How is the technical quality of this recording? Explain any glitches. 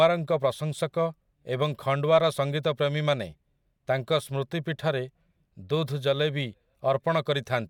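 Nothing stood out as a technical problem on listening, so there are no glitches to explain.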